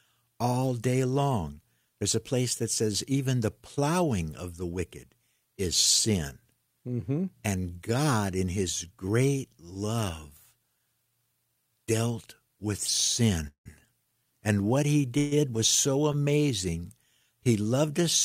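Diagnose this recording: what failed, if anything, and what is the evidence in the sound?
Call audio freeze at the network stage: stalls at 13.47 s (fading to silence) and 15.18 s (brief buzz before "was so"), likely a starved jitter buffer, with nothing lost, just gaps inserted.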